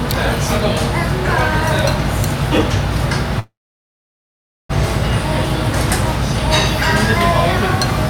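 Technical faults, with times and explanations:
3.39 to 4.71 s, call audio freeze: The sound halts and a brief tail of the last sound carries on, then fades. About 1.17 s of this gap is silence. After 1.3 s the sound resumes exactly where it stopped, with nothing lost. Everything after is simply 1.3 s later. The likely cause is packets held up in transit, so the jitter buffer ran dry and the receiver stretched the last sound.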